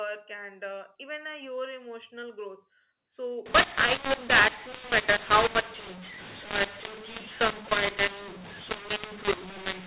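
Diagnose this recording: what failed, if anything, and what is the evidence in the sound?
The G.711 decoder switched companding laws partway through: from 3.46 s to the end at 9.87 s, A-law data is decoded as mu-law. Because the two logarithmic curves don't match, sample magnitudes come out scrambled, some too loud and others too quiet. The speech turns harsh and distorted, and near-silent samples are lifted into an audible noise floor that fills the pauses. Before 3.46 s, the 8 kHz telephone coding sounds clean and band-limited below 4 kHz.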